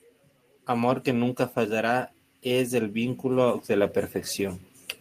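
From about 0.51 s to 3.99 s you can hear automatic gain rising: the AGC decided the input was too quiet and slowly pushed its gain up by about 7 dB, so the speech and the background noise swell together over those few seconds.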